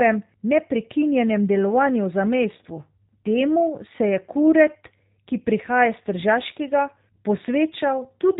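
From start to end, the speech carries plainly audible G.729 codec damage. Nothing reaches above about 3.8 kHz. Each frame is rebuilt from a vocal tract filter, a pitch predictor and a few pulses. The result sounds rough and synthetic, which fits an 8 kbit/s VoIP codec.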